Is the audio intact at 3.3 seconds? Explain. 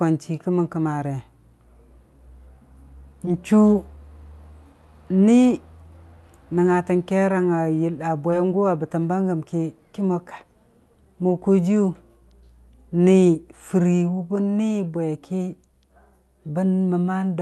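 No. A short concealed packet loss occurs from 3.25 to 3.29 s. About 20 ms of speech went missing. The receiver extended the preceding sound, leaving a brief smear.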